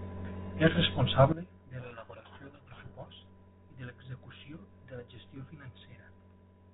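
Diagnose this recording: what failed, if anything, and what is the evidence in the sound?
At 1.32 s the speech and the background noise drop together by about 18 dB in a single step, and they stay down for the rest of the clip. That's a sudden gain jump, likely a digital gain setting in the processing chain applied instantly without a ramp.

From 1.8 to 3.06 s the speech is buried in harsh, grinding distortion. That's a codec payload misread on the G.726 stream, which at 32 kbit/s sounds only lightly coloured around it. The decoder took the bits of each code word in the wrong order until the two ends agreed again.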